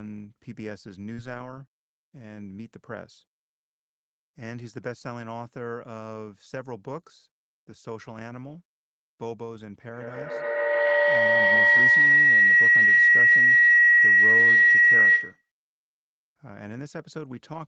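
Speech, carried over a call path whose sound stops at about 8 kHz. Short concealed packet loss at 1.13 to 1.20 s: about 40 ms never arrived in time, and the receiver bridged roughly 35 ms of it by extending the preceding sound, leaving a brief smear and slight timing stretch of a few milliseconds before blending back. A lost packet rebuilt from error correction runs from 1.17 to 1.60 s: about 220 ms were played from the low-bitrate backup copies that Opus carries in the following packets, so nothing drops out, but the audio turns rougher and noisier across what sounds like several separate losses. A feedback howl builds from 9.92 to 15.51 s: two devices in the same room are closing a microphone-to-loudspeaker loop that gains on every pass, narrowing to a tone near 2 kHz with repeats roughly every 150 ms, and peaks about 17 dB above the speech until the loop is broken.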